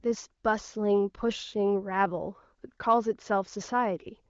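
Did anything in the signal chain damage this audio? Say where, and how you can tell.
No, none of the stages in the chain left audible damage on this speech. The AMR wideband (HD Voice) codec is at work, with the top of the spectrum stopping near 7.4 kHz and the speech clear rather than raspy, which fits one of its higher rates.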